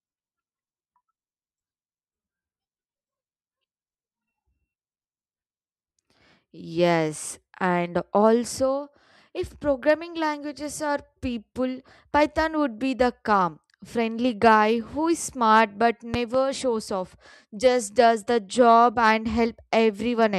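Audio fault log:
16.14 to 16.37 s, loud pop: Two sharp pops arrive in quick succession, roughly 10 dB above the speech. The speech continues underneath. A sudden voltage step was added to the signal, likely from a plug, switch or static discharge.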